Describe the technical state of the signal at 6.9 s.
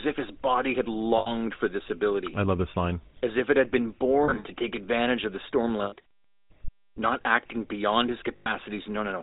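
At 6.9 s, as throughout the clip, the speech has passed through a GSM full-rate codec, which fits a 13 kbps coder. It rebuilds the vocal tract from a filter fed by sparse, regularly spaced excitation pulses and cuts everything above 4 kHz. The result is a muffled, plainly audible buzzy, gravelly roughness.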